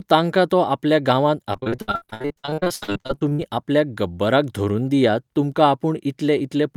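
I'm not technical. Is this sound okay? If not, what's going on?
No. From about 1.53 to 3.41 s, right after "तांकां तो आपल्या गांवांत", there's repeated packet loss (robotic sound). The speech keeps dropping out in dozens of tiny gaps, and about half that stretch is patched by repeating the last bit of sound, so it comes across choppy and robotic until "आपल्याक गब्बराक धरून दियात".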